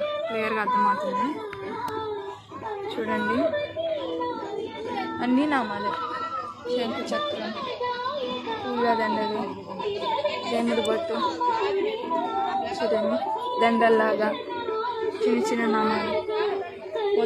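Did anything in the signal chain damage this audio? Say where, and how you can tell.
Yes. There's a sharp snap at 1.88 s and a softer one at 10.85 s, each only a few milliseconds long and sitting on top of the sound. That's an electrical switching spike, likely a nearby switch or motor arcing into the analogue wiring.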